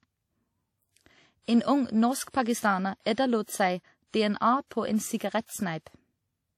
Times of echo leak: none

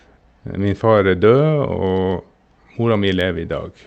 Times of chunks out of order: none

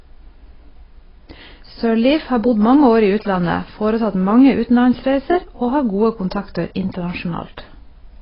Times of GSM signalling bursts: 2.73-3.45

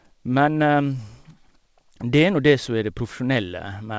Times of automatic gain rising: none

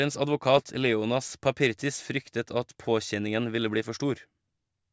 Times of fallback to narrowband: none

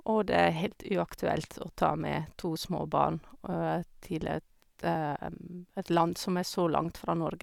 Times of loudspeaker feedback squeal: none

